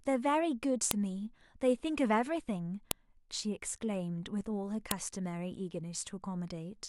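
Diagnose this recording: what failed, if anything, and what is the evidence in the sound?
The failure is a file header played as audio, introduced when stored pieces were joined or streamed. Sharp, loud clicks land at 0.91, 2.91 and 4.91 s in the speech. They repeat exactly every 2.0 s and ignore what the talker is doing. That regular spacing marks the seams between 2-second pieces. Each piece kept its WAV header. Those few dozen bytes of metadata were read as samples, producing a brief snap at every join.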